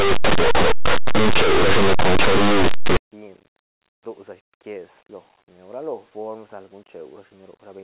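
From 0.0 to 2.97 s, linear audio read as companded: plain 8-bit linear samples are expanded as mu-law codes, so tiny values on one side of zero leap to the largest outputs. The speech sounds harsh and crushed. The waveform looks nearly clipped, and the spectrogram smears broadband energy everywhere.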